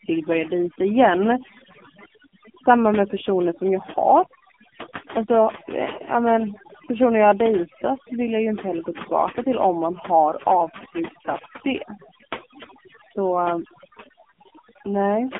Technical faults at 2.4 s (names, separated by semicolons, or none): overdone noise removal; AMR narrowband mobile codec